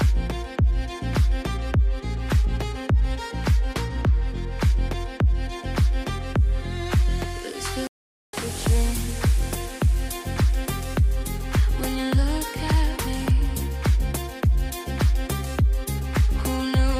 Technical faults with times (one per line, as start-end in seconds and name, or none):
7.87-8.33 playback stall